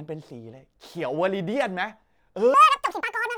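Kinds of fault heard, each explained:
Section at the wrong speed: from 2.54 s to the end, the speech suddenly turns high and hurried, running 1.78 times too fast with pitch raised about ten semitones, which likely comes from that stretch being played back against the wrong clock.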